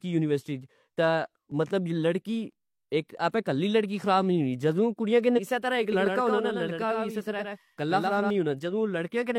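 A speech clip with three separate faults. At 1.52 s there is a small jump forward in the sound. About 10 ms of audio is gone, and the two sides are butted together with no gap. This is likely a dropped buffer (overrun), where the hardware overwrote samples before the program read them. From 5.33 to 5.39 s the audio jumps ahead with a short blip. Part of the programme is missing. The likely cause is a stream segment skipped, with the player moving straight on to the next piece. From 5.92 to 8.30 s a second copy of the speech runs behind the first. It trails by about a tenth of a second and is about 5 dB quieter. It is full-band, with no decay or room sound, and it starts and stops abruptly. This points to a doubled audio track, likely from a second, slower capture path or from two out-of-step copies left in the edit.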